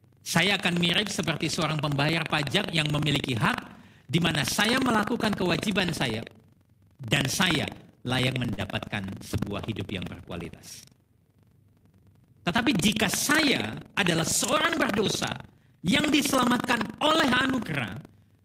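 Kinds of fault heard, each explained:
Buffer tearing: The software writing the playback ring buffer and the hardware reading it have drifted out of step, so they cross once per period. About a tenth of each buffer replays speech from roughly a tenth of a second earlier, with hard joins either side, giving a steady rattle near 23.4 Hz, which fits a 2048-sample buffer. Unlike a dropout, nothing falls silent; the buzz runs the whole clip and only sounds while speech is present.
Short stall from a late packet: Between 8.53 and 8.60 s, after "dan saya layak", a packet arrived late and the jitter buffer ran dry. The receiver held the last sound for 41 ms, then carried on from exactly where it stopped with "sebuah hidup yang berkualitas". Nothing is missing, which separates it from packet loss. Instead one sound lingers too long with a slight buzz or dip, and everything after lands 41 ms later.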